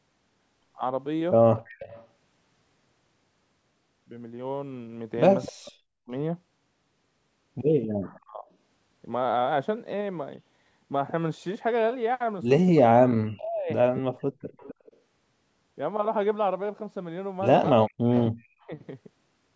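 Speech recorded over a call path, with the top end stopping at 8 kHz, and it carries echo leak at 1.57–2.07 s, 5.42–8.2 s, 13.95–14.96 s and 18.09–18.26 s: a faint copy of the voice the far side played on its loudspeaker trailing 258 ms behind, quietest in the first stretch and rising to roughly 15 dB below the speech later, likely from a loudspeaker on the far end whose echo canceller let residue through. Overlapping this, speech suppressed in double talk appears at 5.48–8.45 s, 12.71–14.46 s and 17.71–18.72 s. The far-end voice is pushed down by as much as about 40 dB in pieces totalling about 0.7 to 1 s per stretch, likely because the canceller could not tell the talker from the echo and attenuated both while both sides spoke.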